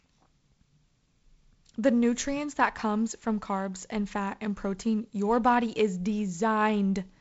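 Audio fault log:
Nothing stood out on listening to this speech, which comes across as ordinary wideband telephone audio.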